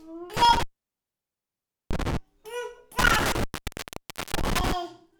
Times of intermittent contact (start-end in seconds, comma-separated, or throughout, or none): 0.37-2.17, 2.99-4.72